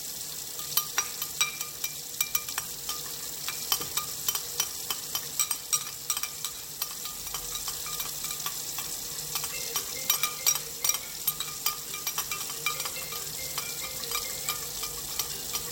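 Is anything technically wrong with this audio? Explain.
Yes. There are two kinds of fault, a skip ahead and two bursts of jitter buffer speed-up.

At about 2.65 to 2.76 s the sound abruptly lurches forward. About 0.7 s of audio is simply gone, and the two sides are butted together with no silence in between, so the flow breaks without any pause to signal it. This is a skip ahead. A block of audio was discarded while later material was already queued, likely because the jitter buffer overflowed, and playback resumed straight from the newer audio.

From 3.21 to 3.52 s, and again from 4.63 to 5.37 s, the sound briefly rushes along faster without rising in pitch: roughly 15% quicker in the first stretch and 12% in the second. This is jitter buffer speed-up. Having accumulated more audio than it wanted, the receiver trimmed away many tiny pitch-period-sized slices in quick succession to catch up. 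Around 50 ms was shaved off in the first burst and around 100 ms in the second, which is what gives those moments their hurried feel.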